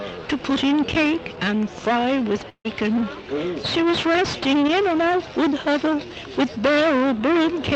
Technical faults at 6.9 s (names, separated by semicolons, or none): none